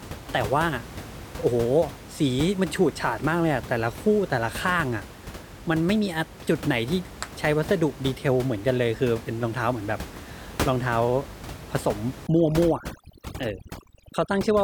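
From 12.27 s to the end of the speech at 14.63 s, the background drops, broken by twinkling, chirpy specks. This is overdone noise removal. The room noise sits only about 14 dB below the speech, and a noise reduction stage set far too hard is pulling down individual frequency bands that come near its noise estimate. Quiet voice detail gets cut along with the noise.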